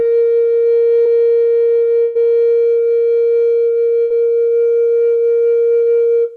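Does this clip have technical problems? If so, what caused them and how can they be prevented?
Yes, there are a few network-delivery problems in this music clip.

First, a short concealed packet loss at about 1.03 to 1.07 s. Roughly 20 ms of audio never arrived at the decoder in time, so the receiver patched the hole by carrying the last sound forward for about 17 ms before blending back into the real signal. You hear it as a tiny smear or wobble in the music rather than a clean dropout. The fix is a larger jitter buffer or forward error correction, so a single late or lost packet gets recovered instead of guessed at.

Then there are two bursts of packet loss, at 2.03 to 2.17 s and at 4.03 to 4.12 s. In the first, about 120 ms went missing and the concealment stretched the last sound across roughly 118 ms, fading it down as it went, so you get a held, fading tail with no actual silence before the music picks up again further along. 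The second is the same thing on a smaller scale, about 80 ms lost with around 71 ms filled in. In both cases whatever was played during those gaps is simply gone. To prevent this, fix the congested or unstable network path, and add redundancy or packet interleaving so a run of consecutive losses doesn't wipe out a whole stretch at once.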